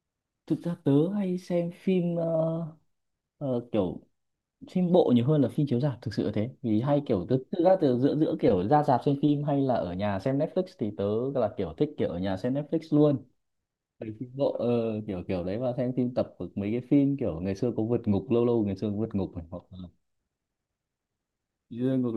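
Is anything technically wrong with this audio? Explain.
No, nothing technically wrong is audible anywhere in this recording.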